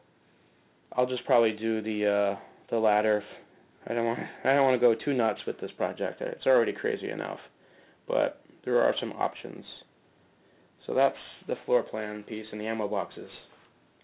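Throughout, the audio was downsampled without an anti-aliasing filter, to what sounds like an 8 kHz rate. This aliasing folds content above 4 kHz back as unrelated frequencies, about 25 dB below the sound, and the spectrum runs hard up to 4 kHz.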